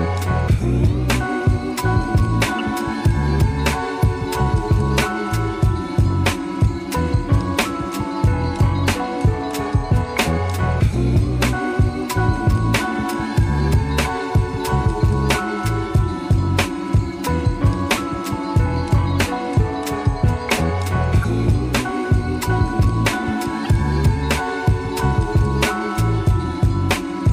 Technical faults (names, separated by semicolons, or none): corrupt frame decoded